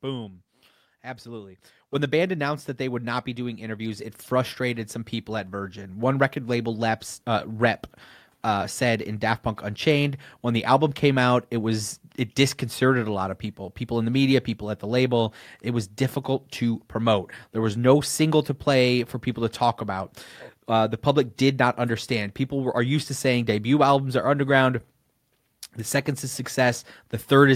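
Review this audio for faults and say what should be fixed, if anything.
Microphone volume stepped up twice. At 1.95 s, before "the band announced that", speech and background jump about 8 dB. At 3.99 s, after "not be doing interviews", they rise about 3 dB. Both jumps come from software raising the input gain in one step. To prevent it, disable automatic microphone gain adjustment in the call software.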